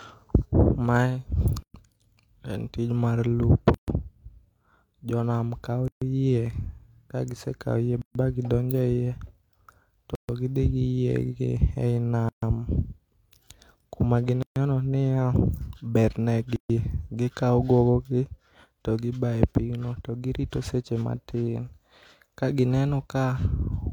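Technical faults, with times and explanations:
1.63, 3.74, 5.88, 8.02, 10.15, 12.29, 14.43 and 16.56 s: gap at a join of encoded pieces. Silences of 118 to 136 ms recur every 2 s where separately encoded segments were butted together without trimming encoder delay and padding.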